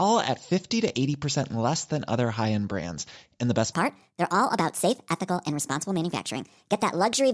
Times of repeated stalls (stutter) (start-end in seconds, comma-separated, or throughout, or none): none